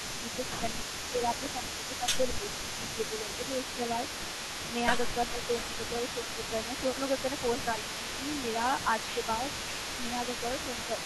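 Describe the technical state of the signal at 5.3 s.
A delayed copy of the speech trails about 0.35 s behind, roughly 10 dB down, throughout: an echo leak, likely from a far-end echo canceller missing loudspeaker pickup. From 5.24 to 5.40 s the speech dips by up to about 15 dB. This is speech suppressed in double talk, likely the canceller ducking its own talker along with the loudspeaker echo.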